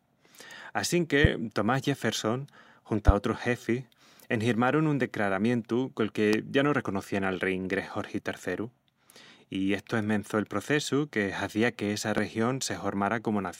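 A loud pop hits the speech four times. The first comes at 1.24 to 1.27 s. The second lands at 3.08 to 3.11 s, just before "otrus xefis enhirmarun un". The third falls at 6.33 to 6.36 s, between "enhirmarun un decraramientu col" and "ya no reconocían al". The last is at 12.18 to 12.21 s, after "que hazía que essa". Each is a single sharp thump, about 20 dB above the speech, the last nearer 15 dB. The speech runs on beneath it. The likely cause is a brief voltage spike, such as static or a switching glitch.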